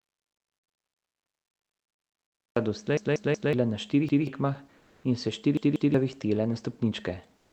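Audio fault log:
0.00–2.56 s, audio dropout to silence: the clip opens in dead digital silence, with no room tone at all, and stays that way until about 2.56 s, when the speech comes in mid-flow. It was already under way when the recording begins. A lost input, such as a dropped device or link, is the likely cause, with the recorder writing silence the whole time, so whatever was said before 2.56 s is simply gone.
0.93–1.12 s, 2.97–3.53 s, 4.09–4.27 s and 5.57–5.94 s, repeated buffer: each of these is a stutter where a chunk of about 186 ms plays again with a hard join at each repeat. The chunk repeats once at 0.93 s and 4.09 s, three times at 2.97 s and twice at 5.57 s, just after "in se". The chunk length fits an 8192-sample buffer that the device replayed because fresh audio didn't arrive in time. Roughly 0.2, 0.5, 0.2 and 0.4 s of real audio are lost behind those repeats.
4.77–5.03 s and 7.37–7.52 s, comfort noise in place of the background: in these two pauses the real background drops out and a flat, featureless hiss fills in. 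The first lasts about 260 ms, right before "in se", and the second about 156 ms at the very end. The background sits around 40 to 44 dB below the loud parts, and the level shifts by only about 1 to 2 dB. You hear the texture change more than the loudness. Opus DTX is the likely cause: the sender stops during the pause and the receiver synthesises noise instead. This is the same Opus call path that, at 40 kbps, trims the top end around 8 kHz throughout.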